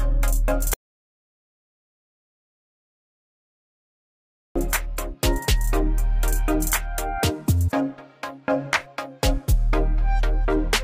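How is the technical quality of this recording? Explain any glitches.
The recording has one serious glitch. From 0.74 to 4.56 s, an audio dropout to silence leaves about 3.8 s of silence, likely from a lost input link. Unlike a quiet pause, no room tone remains.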